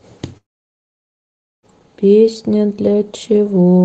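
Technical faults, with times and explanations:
0.37–1.66 s, long network dropout: the speech breaks off and the last sound is drawn out as a brief buzzy hiss that fades within a few hundredths of a second, leaving about 1.2 s of near-silence before speech resumes with roughly 1.26 s simply gone. The likely cause is a long run of lost packets on the call path. Unlike a short packet-loss glitch, the concealment gives up and falls silent, and unlike a natural pause, the speech restarts mid-stream instead of where it left off.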